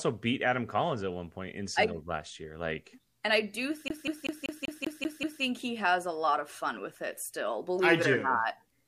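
CD stuck on one turn, from 3.88 to 5.42 s: a scratch keeps throwing the laser back to the same point on each rotation, so a single slice of speech about 0.19 s long plays over and over, eight times in all, with a brief mute at every jump. The result is the rapid, perfectly even stutter of a skipping disc, the same fragment hammering away until playback breaks free and the speech continues.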